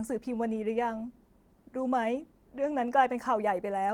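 Speech with no technical faults; the Opus voice compression at about 24 kbps in hybrid mode keeps the full bandwidth and leaves only light coding traces.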